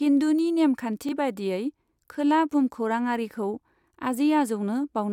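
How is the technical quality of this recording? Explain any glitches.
There is one glitch in the speech: a Bluetooth stutter from 1.09 to 1.13 s. A roughly 21 ms slice repeats once, which points to a single lost packet, and the audio then resumes further on. Unlike a dropout, it fills the gap with a repeated sound rather than silence.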